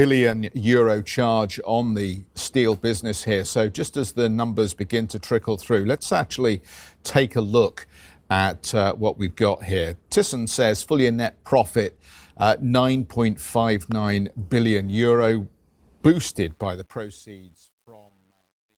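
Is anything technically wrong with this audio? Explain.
Yes, there are two faults. A loud pop sits at 13.92 to 13.94 s, just before "billion euro". A brief voltage pulse, likely from a switch, plug or static discharge, has been added to the signal path and shaped by the circuitry after it. It peaks a few decibels above the speech, so it stands out as a single sharp thump while the talking carries on beneath it without a break.

The closing fade-out has truncation distortion from 16.40 s to the end of the clip. The level reduction was done digitally at too coarse a resolution and without dither, which fits a stage keeping about 10 bits. As the speech gets quieter, the waveform collapses onto a few square steps. From about 17.2 s to the end, the tail sounds gritty instead of dissolving cleanly. The light Opus voice coding on the clip adds nothing to this.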